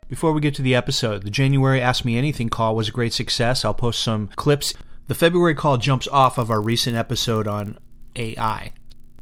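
A speech recording that, from 6.22 s to the end at about 9 s, right after "call jumps", develops a 50 Hz buzz tracking the speech level: a filter restarted on every block, losing its state and producing a start-up transient per block, which fits 20 ms blocks.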